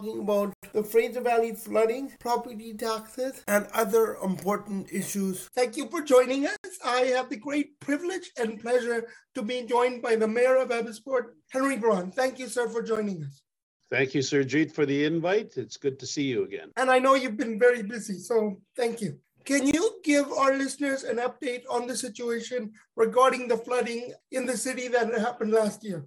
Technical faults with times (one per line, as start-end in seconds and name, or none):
0.53-0.63 block of digital silence
6.56-6.64 block of digital silence
12.96 block of digital silence
19.71-19.73 block of digital silence